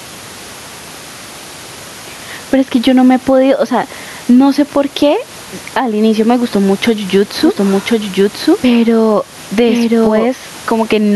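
Right from the start there's gain pumping running through the whole speech clip. The room noise sits about 30 dB under the speech, and the level swings by around 10 dB. The likely culprit is input gain cranked way too high, so a fast limiter or compressor keeps clamping down on each loud sound, leaving everything squashed and flat in level.

Then from 7.43 s to 10.27 s you get a doubled audio track. A second copy of the speech runs roughly a second behind the original, at about the same loudness and full-band. It's dry, with no decay or room colour, and it cuts in and out abruptly at those two points. It's likely a second, slower capture path or an edit leaving two out-of-step copies on top of each other.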